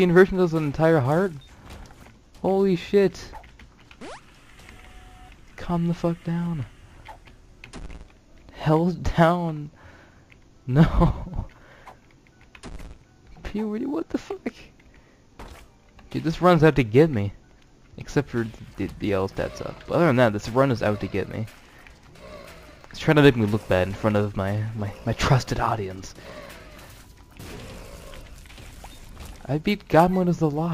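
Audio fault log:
No faults detected anywhere in this recording.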